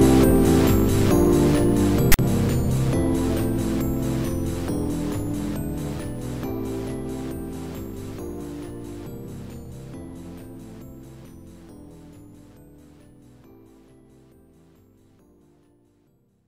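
At 2.12 to 2.19 s, file tags played as audio: text metadata decoded as samples gives a harsh, one-sided rasp, then its zero padding drops to silence.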